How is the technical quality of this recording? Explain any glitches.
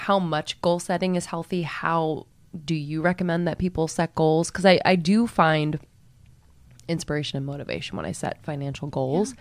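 No glitches or faults detected.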